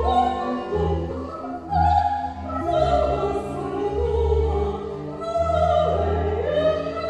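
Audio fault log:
1.09 s, compressed frames skipped: the audio jumps forward by about three frames, losing roughly 70 ms. The frame length of 23.2 ms fits 1024-sample frames at 44.1 kHz.
2.60 s, compressed frames skipped: a larger jump of about seven frames drops roughly 200 ms.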